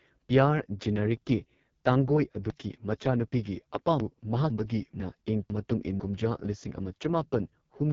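From the start, the speech carries the sound of the AMR wideband (HD Voice) codec at heavy damage. The voice is rough and raspy, and nothing is present above about 7.3 kHz. That harshness fits the 6.6 kbit/s lowest mode, where the vocal tract model has too few bits to follow the speech and the top band is just shaped noise.

Between 2.5 and 4.5 s there are chunks out of order. The audio is cut into 500 ms pieces, and one piece plays three chunks late, after material that should have followed it. No audio is missing, but the sequence jumps backward at hard joins between the pieces. The result is a jumbled, garbled stretch lasting two seconds.

From 5.0 to 6.0 s the same chunks-out-of-order fault recurs on a smaller scale. Here one 500 ms chunk is late by a single position, so two adjacent half-second pieces are swapped. This gives a brief backward skip, with three hard joins.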